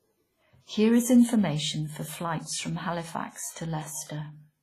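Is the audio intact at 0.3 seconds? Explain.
No. At 0.3 seconds the speech carries heavy WMA compression damage, present throughout. The sound is ringing and washy, with hiss that breathes with the voice and nothing above 15.4 kHz. The likely cause is a long-block transform codec smearing quantisation noise, which fits a low bitrate near 24 kbps.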